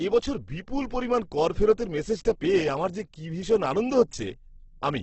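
Throughout, the speech is rough and grainy with nothing above 8.2 kHz, likely Opus compression near 12 kbps. Noise-filled bands give grain, not MP3-style swirling.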